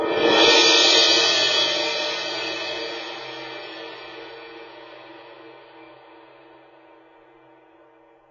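From start to finish the music carries heavy AAC compression damage: nothing survives above 7 kHz, so the top end sounds dull and boxed. Sustained tones warble and smear, and bright sustained sounds turn fizzy where the coder has starved bands of bits. On a spectrogram the energy stops at a hard ceiling near 7 kHz, with patchy holes and blotches below it. The sound points to AAC-LC at a very low bitrate, likely around 16 kbps.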